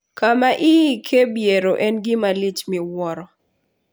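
Listening to this recording of speech, nothing stood out as a technical problem.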